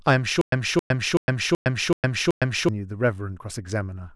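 Stutter with silent gaps runs from 0.41 s to 2.69 s. A 269 ms fragment repeats six times, each followed by 110 ms of digital silence, a 379 ms cycle. The likely cause is a stalled stream replaying its last chunk at each retry. The intervening speech is lost.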